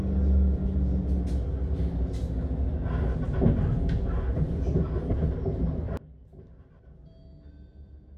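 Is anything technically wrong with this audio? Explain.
Yes. Frames out of order at 0.56–0.75, 3.15–3.34, 5.12–5.32 and 6.60–6.79 s: two adjacent blocks of about 93 ms each swap places, producing garbled flutter. The spectrogram shows three abrupt vertical seams.

From 5.97 s to the end, the mono level drops by about 25 dB. The likely cause is one channel inverted, so that shared content cancels and leaves a collapsed waveform.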